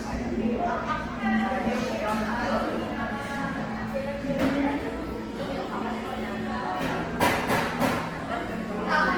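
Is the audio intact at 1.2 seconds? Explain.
No. At 1.2 seconds the sound carries Opus compression artefacts, present from start to end. Tones come out noisy, rough and grainy rather than swirling. The damage is plainly audible. The likely cause is an Opus encoder in its music mode at a low bitrate, around 16 kbps. That mode keeps each band's energy but fills starved bands with folded copies of lower bands or with noise. The bandwidth stays full, reaching about 20.2 kHz.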